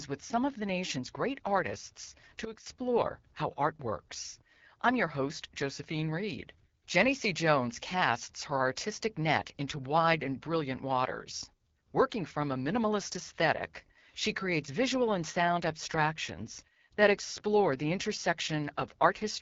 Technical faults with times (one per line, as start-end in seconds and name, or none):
0.00-19.41 AMR wideband (HD Voice) codec
2.45-2.66 sudden gain jump